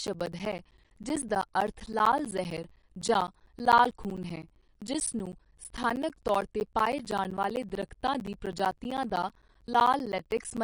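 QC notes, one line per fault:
Throughout: MP3 compression, likely the cause. The speech sounds watery and swirly, with metallic chirping on s sounds and softened consonant attacks, and nothing is left above 10.6 kHz, which fits a low bitrate of around 40 kbps. Unlike a plain low-pass filter, the top edge is accompanied by weak detail flickering in and out from frame to frame, so the damage moves with the sound rather than simply dulling it.
0.07 to 10.58 s: periodic USB or driver dropouts. Short gaps of silence, each roughly 10 ms, recur every 64 ms, about 150 in all, heard as a steady ticking that sounds only while the speech is present. A background task stalling the audio path at a fixed interval would produce this. Its strict regularity separates it from random clicks or packet loss, and the gaps carry no swirl, unlike the codec's smearing.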